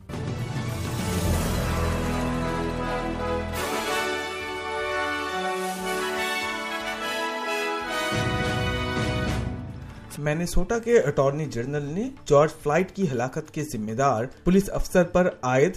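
No technical faults can be heard anywhere in the clip.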